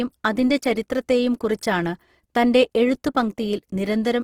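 Throughout the speech, the likely cause is heavy Opus compression in its music (CELT) mode, with the encoder short of bits and filling starved bands by copying lower ones or inserting noise. The damage is plainly audible: the voice turns grainy and rough, and the speech takes on a noisy texture rather than a watery swirl. The full bandwidth is kept, and the degree of damage points to a low bitrate, around 16 kbps.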